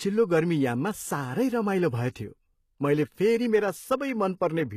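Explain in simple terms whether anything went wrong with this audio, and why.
Yes: the s sounds are gritty and lispy from start to finish, with nothing above about 14.9 kHz, likely from HE-AAC compression, which fakes treble rather than simply dulling it.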